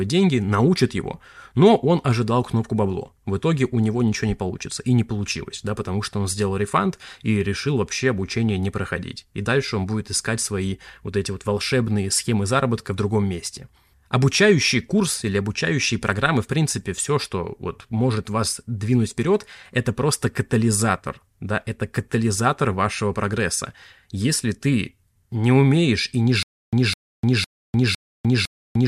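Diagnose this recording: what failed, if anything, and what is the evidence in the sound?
The fault is a stutter with silent gaps at the playback or streaming buffer stage. It starts at 26.43 s, just after "не умеешь и не", and runs to the end. A burst of about 207 ms of speech repeats five times. Each repeat is followed by about 299 ms of digital silence, so the cycle is about 507 ms. The likely cause is a stalled stream that replays its last fragment on each retry and then runs dry. The audio due in that span never arrives.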